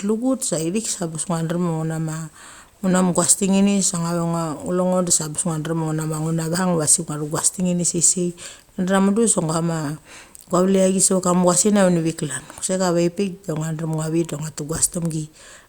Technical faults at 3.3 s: none

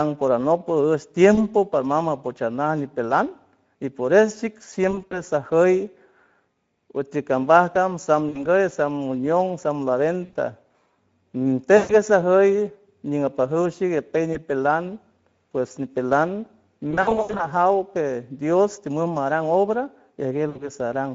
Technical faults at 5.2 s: Speex codec; VoIP packet loss concealed by the speech codec

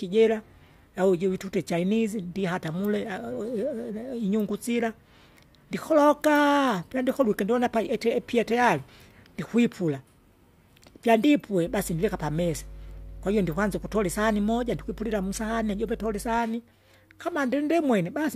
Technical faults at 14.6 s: mains hum

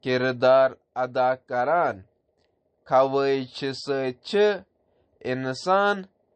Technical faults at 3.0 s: MP3 compression

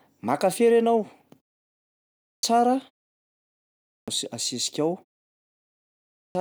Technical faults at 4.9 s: none

